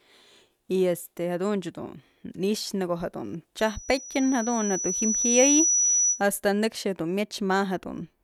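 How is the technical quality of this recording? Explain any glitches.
The recording is marred by a loudspeaker feedback squeal from 3.59 to 6.23 s. The microphone picked up the loudspeaker it was feeding, and at 5.9 kHz the loop gain exceeded one, so that frequency reinforced itself on every pass around the loop. In the sound, a thin, piercing tone swells over roughly two seconds until it sits a few decibels above the speech, then holds as a sharp whistle before cutting off at 6.23 s.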